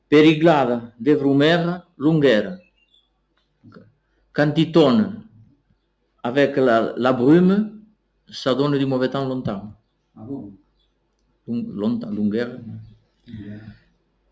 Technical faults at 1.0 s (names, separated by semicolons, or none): noise suppressor applied to music or sounds